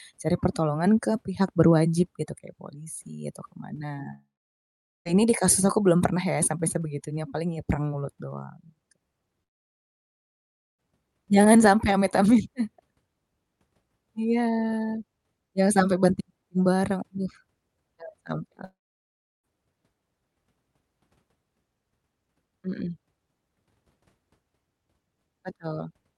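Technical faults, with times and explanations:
4.13 to 5.07 s, 9.43 to 10.80 s and 18.64 to 19.45 s, long network dropout: the speech first cuts out after "polisi atau ke mana" and resumes at "di kasus aku belum", losing about 0.92 s, then 1.36 s and 0.80 s. Each gap is a brief fading concealment tail, then near-silence. This is likely lost packets on the Opus call path, whose band stops near 12 kHz. The receiver briefly extends the last sound and then outputs nothing until audio arrives again, so the missing stretch never returns.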